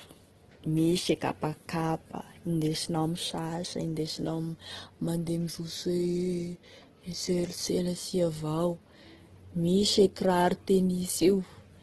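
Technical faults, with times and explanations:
Throughout, Opus compression: the speech sounds rough and grainy rather than swirly, with nothing above 12.1 kHz. That points to heavy CELT-mode coding at a rate that fits around 12 kbps, likely filling starved bands with folded copies or noise.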